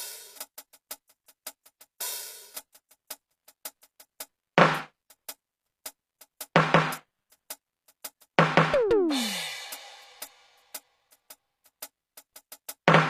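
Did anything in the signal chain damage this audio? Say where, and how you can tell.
Yes, the codec stage damaged this music throughout. The treble sounds gritty and metallic, with harmonics that fail to line up, and nothing is present above 14.9 kHz. That points to a low bitrate of around 24 kbps, likely HE-AAC compression rebuilding the upper band from copied lower bands.

The same codec stage also causes pre-echo: a brief hiss smears in ahead of the attacks at 2.73 to 2.75 s, 2.89 to 2.91 s, and 8.20 s. Quantisation noise spread across each transform block leaks into the quiet instant before each sharp onset, blunting it.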